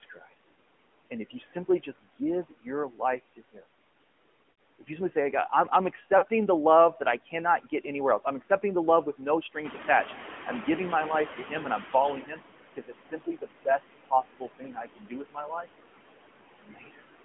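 Speech carried over a mobile call, and you can hear the AMR narrowband mobile codec on every word. The band stops at about 3.4 kHz and the lowest voice energy below 200 Hz is gone, so everything sounds boxed-in and telephone-thin. On top of that there's a plainly audible buzzy, slightly synthetic edge. That comes from the codec rebuilding the voice from a vocal-tract model fed by a handful of pulses instead of sending the actual waveform, and the amount of damage points to a mid-rate mode somewhere around 10 kbps. Noise suppressor artifacts also run the whole way through. The suppressor pulls the steady background down by about 18 dB frame by frame, so the noise drops away in the pauses and swells back up under the talking. There are two bursts of lost AMR speech frames. The first is at 4.52 to 4.58 s, a 60 ms gap that fits about three 20 ms frames. The second is at 6.18 to 6.26 s, between "I'm I'm" and "the love", and it sounds like about two frames' worth. 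Each time the decoder keeps repeating the last pitch and vocal-tract settings at falling gain, so you get a short smeared, warbly stretch that sags toward silence before the voice comes back rough for a moment. Around 9.5 s the room noise jumps by about 11 dB, which is genuine background in the room and not a system fault. From 9.64 to 12.42 s you can hear the noise suppressor catching up. Its noise estimate lags the jump, so the louder background comes through with less reduction at first and then slides down over roughly 2.8 s as the estimate adapts, ending up about 17 dB lower.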